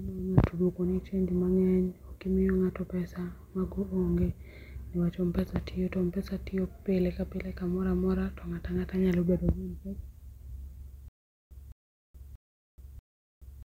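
Speech, with a stutter with silent gaps from 11.08 s to the end: a 210 ms fragment repeats four times, separated by 425 ms of digital silence, likely from a stalled stream.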